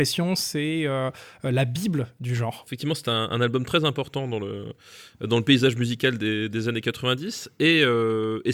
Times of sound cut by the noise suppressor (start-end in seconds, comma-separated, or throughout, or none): none